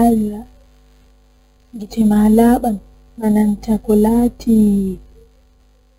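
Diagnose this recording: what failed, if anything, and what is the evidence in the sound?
The failure is at the sample-rate conversion stage: imaging from sample-and-hold upsampling runs through the whole speech clip. A metallic fizz sits about 26 dB below the voice between roughly 5.5 and 11 kHz and rises and falls with it, which points to material near 11 kHz raised to 48 kHz by repeating samples without filtering. A spectrogram shows the harmonics mirrored above 5.5 kHz, sloping opposite to the pitch. Zoomed in, the waveform is a staircase.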